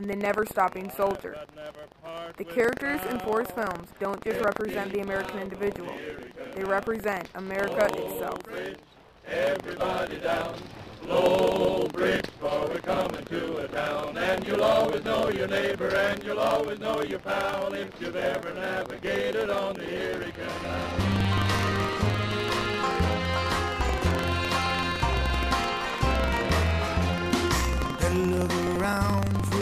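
There's buffer tearing running through the whole clip, a rattly robotic buzz at about 23.4 Hz that sits on the sound wherever there's signal. Every period, a small slice, around 4 percent, gets replaced with audio from roughly a tenth of a second earlier, which fits a 2048-sample buffer.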